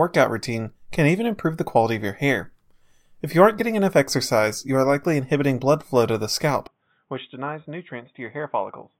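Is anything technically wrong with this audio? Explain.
Yes. At 6.67 s, right after "flow to the scalp", the speech abruptly turns dull and boxy and stays that way to the end. The likely cause is an input switched to a poorer device mid-recording. The new path passes nothing above 3.8 kHz, so the upper band vanishes. The level drops by roughly 10 dB. A new background noise appears, sitting roughly 45 dB below the signal. There is no gap at the switch.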